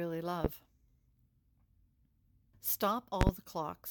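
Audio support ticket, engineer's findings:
Loud pop at 0.45–0.49 s, single, about 20 dB above the speech. Second event 3.21–3.31 s, two pops in quick succession, about 25 dB up. Likely a voltage step from plug, switch or static, shaped by downstream circuitry. Speech continues underneath.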